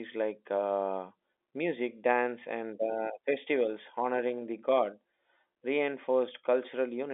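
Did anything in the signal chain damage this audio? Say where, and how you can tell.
No, nothing in the signal chain damaged this audio.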